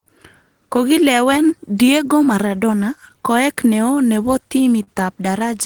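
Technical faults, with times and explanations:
4.83 to 4.89 s, short stall from a late packet: a packet didn't show up on time, so the jitter buffer ran dry and the receiver kept stretching the last bit of sound, about 40 ms of fill, until the packet turned up. It then picks up exactly where it left off, so nothing is lost. You just hear that moment held a touch too long, with a faint buzz or dip, and everything after it lands about 40 ms later.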